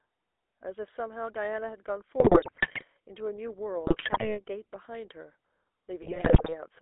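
Throughout, the GSM full-rate codec, consistent with 13 kbps coding, roughens the speech into buzzy gravel, and the spectrogram shows energy confined to roughly 0.3 to 3.5 kHz. GSM bit errors strike at 2.2 to 2.83 s, 3.86 to 4.39 s and 6.02 to 6.56 s. Corrupted filter, pitch and gain values cause squawks, pops and gargling, seen as sudden waveform level spikes and warped spectral patches.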